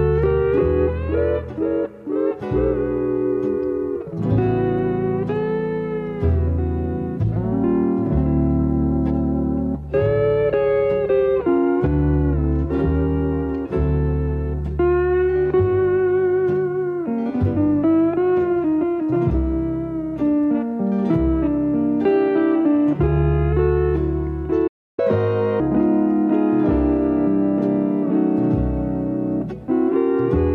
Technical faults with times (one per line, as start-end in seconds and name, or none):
24.67-24.99 playback stall
24.99-25.60 catch-up at higher speed